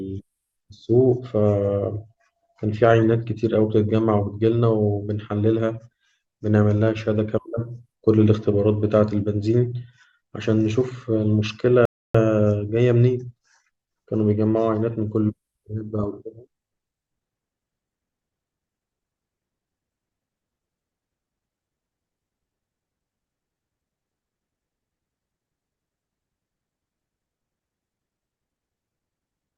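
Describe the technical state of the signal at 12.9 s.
At 12.9 s the speech signal is intact, with no fault audible at that moment.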